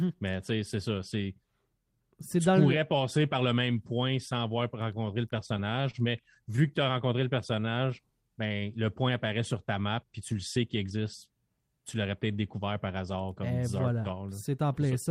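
French speech with three jitter buffer faults. From 5.37 to 6.84 s, between "sans avoir rencontrer le" and "as rencontré", repeated stalls (stutter) appear: eleven brief hitches, none longer than 27 ms, where late packets emptied the buffer and the last sound was stretched, so the audio drags but nothing is dropped, unlike packet loss. From 7.24 to 8.22 s, just after "as rencontré" and up to "ben le point apparaît", a jitter buffer slow-down plays at 91% speed by repeating pitch periods, adding 100 ms while keeping the pitch. A slowed playback rate would lower the pitch instead. From 10.21 to 10.91 s, after "sur ta map puis", a jitter buffer speed-up runs at 110% by cutting pitch periods totalling about 70 ms to drain an overfull buffer. The speech sounds hurried but not higher-pitched.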